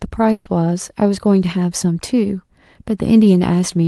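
From 0.31 to 0.47 s, a burst of packet loss: 140 ms is concealed as a decaying buzz or hiss, showing as smeared, fading harmonics without silence, before audio resumes further on.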